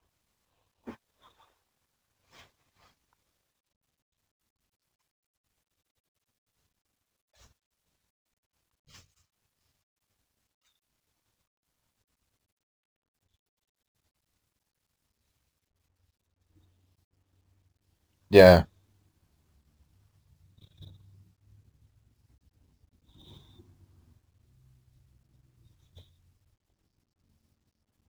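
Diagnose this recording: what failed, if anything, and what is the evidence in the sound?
Sample clock jitter throughout the speech, at the converter stage: an unstable clock of several microseconds times each sample slightly off, adding roughness about 30 dB below loud, bright passages.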